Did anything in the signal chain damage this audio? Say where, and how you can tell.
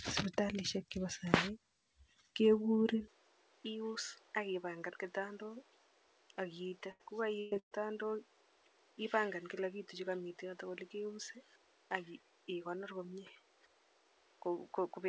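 Yes. At the capture stage, from 3.08 s to the end, the input likely switched to a poorer device. With no gap, the spectrogram's top edge falls from the call path's 8 kHz limit to 7.1 kHz. The waveform shrinks by about 10 dB, and a new noise floor sits roughly 30 dB below the signal.

At the network stage, a short concealed packet loss at 6.68 s removed about 40 ms. The decoder filled 35 ms by extending the preceding sound. On a spectrogram this shows as a brief smeared, copied-looking patch rather than a clean gap, heard as a small wobble.

Also at the network stage, three bursts of packet loss hit 6.91 to 7.03 s (80 ms missing), 7.40 to 7.54 s (120 ms) and 7.59 to 7.74 s (120 ms). Concealment stretched the last sound into a fading buzz or hiss, visible as smeared harmonics. The last burst ends in 90 ms of flat-line silence.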